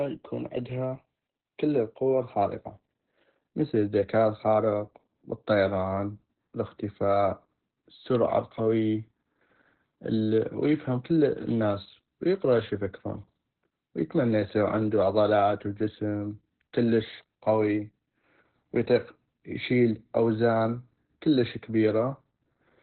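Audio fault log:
Throughout: Opus voice compression. Nothing is heard above 4.2 kHz, pointing to narrowband SILK linear-prediction coding at roughly 8 kbps. The excitation is coded very coarsely, so the speech sounds muffled, hoarse and slightly robotic, with heavy codec damage.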